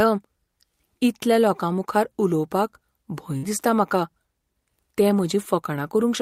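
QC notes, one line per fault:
3.37–3.46 s, burst of packet loss: the sound smears into a brief held, fading tail, then jumps ahead into "दिसता म्हाका". Consecutive packets went missing; the receiver extended and faded the last sound for about 53 ms, and roughly 60 ms of audio is gone.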